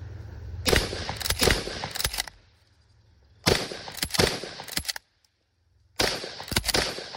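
A doubled audio track runs through the whole clip. A second full-band copy trails the original by roughly 0.7 s, at about the same level. It has no decay or room colour. A slower second capture path or a misaligned edit is the likely cause.

From 3.93 to 3.96 s the audio jumps ahead and the sound is briefly disrupted. This is a broken MP3 bit reservoir. Frames were likely cut, so the next frame borrowed the wrong bytes. The disruption spans about one 26 ms frame.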